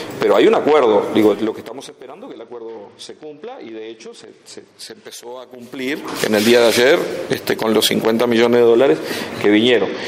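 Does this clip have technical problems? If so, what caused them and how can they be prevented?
Yes. From 1.25 to 2.0 s, a gain change of about 20 dB was applied in unsmoothed 2 dB jumps, some twenty per second, producing zipper noise: each jump leaves a small click, heard as a rapid ticking riding on the fading sound. Interpolating gain per sample or ramping it over each buffer prevents this.

From 2.34 to 5.07 s and again from 9.77 s to the end, a Bluetooth SBC bit pool drop occurred. The congested link forced the encoder down to what sounds like a bit pool near 10, roughly 84 kbps, so the upper sub-bands were starved and the rest coarsely quantised. The treble turns dull and a gritty grain appears until the rate recovers. Reducing radio congestion, or using a codec that degrades more gracefully, prevents it.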